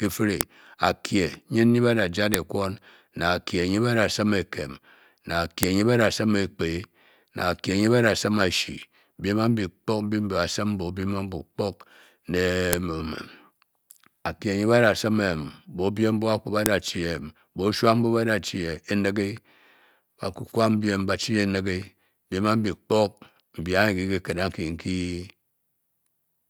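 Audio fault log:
0.41, 2.34, 5.63, 12.73 and 16.66 s (the last just after "a kwu ba"), file header played as audio: five sharp, loud clicks, each a snap lasting about a millisecond that cuts across the speech regardless of what it is doing. Each marks the start of a new joined section. The few dozen bytes of a WAV header were never stripped at those joins, so they were read as sample values, producing a brief burst of arbitrary data.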